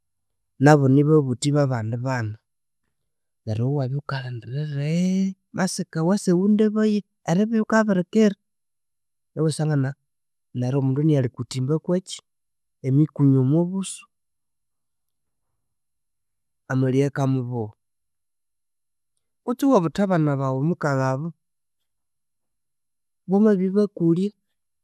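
A recording of speech with nothing technically wrong to report. No fault can be heard anywhere in it, so there are no times or causes to give.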